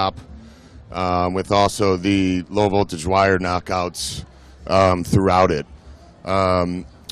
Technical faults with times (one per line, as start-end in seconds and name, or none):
none